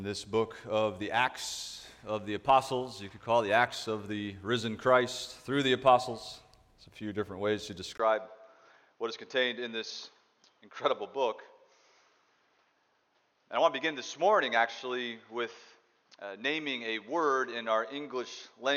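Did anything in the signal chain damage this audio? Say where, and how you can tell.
Yes. At about 7.98 s a brief gap of roughly 20 ms is followed by a duller, boxier sound. The top end now stops at 6.6 kHz, the level drops by about 5 dB, and a different background noise sits well below the signal, around 45 dB down. This pattern of an input switched to a poorer device points to the driver or device-selection stage, most likely a change of microphone or a headset's call profile, and it lasts to the end.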